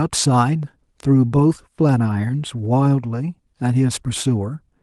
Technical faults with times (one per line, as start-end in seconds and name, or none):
none